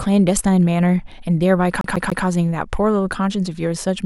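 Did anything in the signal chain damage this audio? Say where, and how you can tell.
Yes: CD stuck on one turn, 1.81 to 2.25 s. At playback, the laser jumps back each revolution, so one 0.14 s slice of speech repeats three times with brief mutes.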